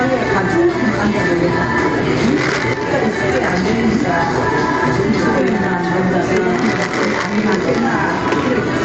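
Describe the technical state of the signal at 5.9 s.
Gain pumping is present at 5.9 s and runs through the whole clip. The input level is likely set far too hot, so a fast limiter or compressor clamps down on each loud sound and then lets go. The gain swings by around 10 dB under every loud event, leaving the dynamics squashed and breathing. The call codec's band limit near 8 kHz also applies here.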